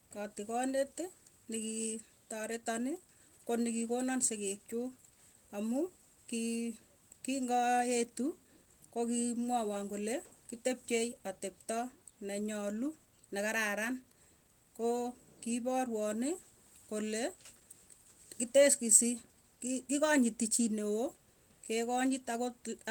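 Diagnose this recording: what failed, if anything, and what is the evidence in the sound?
Nothing has failed here as far as I can hear; the speech carries the light, full-band character of Opus voice compression working as intended, and nothing in the sound points to trouble at any stage of the chain.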